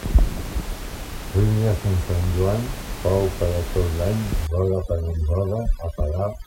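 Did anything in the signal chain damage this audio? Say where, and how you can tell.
Yes. From 4.47 s, right after "per a tot l'any", overdone noise removal in the call processing kicks in. The background drops and breaks up into twinkly specks.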